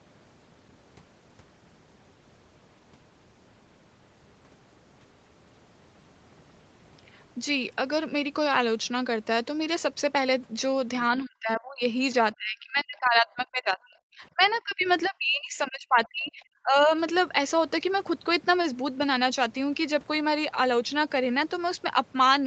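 Speech suppressed in double talk hits this speech clip at 11.1 to 11.82 s, 12.37 to 14.42 s, 14.58 to 14.88 s and 15.04 to 16.89 s. The talker's level drops by up to about 40 dB, which is likely an echo canceller turning down the talker along with the loudspeaker echo while both sides spoke at once. The other side's voice leaking through appears as brief scraps at 15.04 to 15.08 s and 16.05 to 16.09 s, about 30 to 35 dB below the speech, likely where residual loudspeaker sound escaped echo cancellation.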